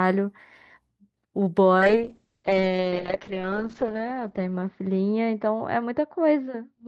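From 1.78 s to the end, the speech turns rough and muffled, losing its top end above about 8 kHz. This is a call bitrate drop: the encoder's budget fell from 64 to 6 kbps, holding its lowest for 2.16 s, forcing coarse coding and narrower bandwidth.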